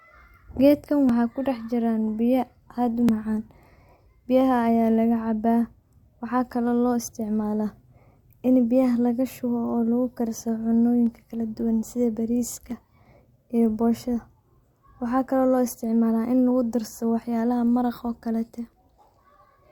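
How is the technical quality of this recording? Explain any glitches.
The speech has two kinds of glitch: repeated tiny skips and one short crackle burst.

Overlap between stream segments causes tiny skips at 1.09 s (just before "kudax jiraan biya aad"), 3.09 s (just after it), 7.08 s, 11.07 s and 13.06 s. Adjacent segments, which fall on a 2-second grid, claim the same instant, so a few milliseconds are trimmed. On the waveform each shows as a sudden step and on a spectrogram as a thin vertical line.

Processor overload crackle runs from 12.48 to 12.91 s, right after "kala duban sidha". Buffers of under a millisecond were repeatedly missed and simply skipped, roughly fifteen times, leaving gritty tearing. The waveform shows many small discontinuities, and the spectrogram shows dense broadband speckle.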